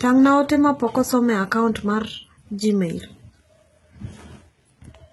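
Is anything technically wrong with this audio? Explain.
Yes. Throughout the speech, the treble above the crossover sounds synthetic, with gritty, lispy s sounds and a metallic sheen, and nothing sits above 11.8 kHz. This is likely heavy HE-AAC compression, consistent with about 16 kbps, where spectral band replication copies lower bands upward. On a spectrogram, the upper band shows repeated, smeared harmonic patterns ending in a hard ceiling.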